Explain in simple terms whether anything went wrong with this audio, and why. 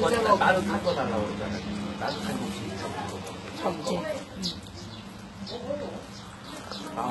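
The whole clip, from start to finish, has a gritty, metallic sheen on the top end. The highs sound bright enough, but they're not quite real, with a fizzy, lispy edge on anything crisp. That's the signature of HE-AAC compression, and heavy at that. The likely story is that only the lower part of the sound was kept properly, and the treble was faked by copying lower bands upward, so it never quite matches what sits underneath.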